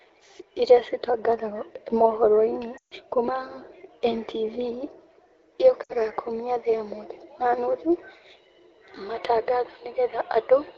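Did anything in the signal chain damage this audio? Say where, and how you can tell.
Yes. Radio errors, at the network stage, caused lost AMR speech frames at 2.77–2.94 s (140 ms, which fits a run of seven 20 ms frames) and at 5.83–5.93 s (60 ms). The decoder repeated its last pitch and vocal-tract settings with falling gain, so the sound smears and fades. A spectrogram shows frozen harmonics fading toward dark, and the waveform envelope decays.

From 9.16 s to the end, the input was likely switched to a poorer device at the capture stage. Everything above 5.1 kHz disappears at once, with no gap and no clear level change, so the sound turns duller. On a spectrogram, the band that reached the AMR-WB codec's 7 kHz ceiling before 9.16 s ends in a flat cutoff. The new background noise sits roughly 55 dB down.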